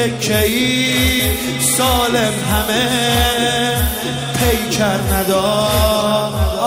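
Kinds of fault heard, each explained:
Skip ahead: At about 1.19 s, roughly 0.4 s of sound is dropped. Playback leaps forward with no gap, splicing the two sides almost directly.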